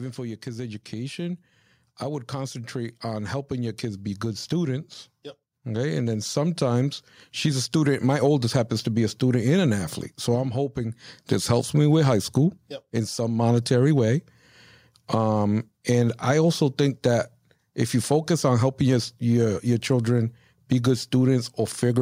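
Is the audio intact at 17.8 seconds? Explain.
Yes, the speech at 17.8 seconds plays through intact, with no dropout, click, distortion or other fault at that moment.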